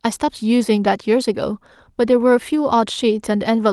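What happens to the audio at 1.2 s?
Nothing goes wrong at 1.2 s: the speech carries straight through that moment with no dropout, glitch or other fault, just the ordinary sound of a WebRTC call path.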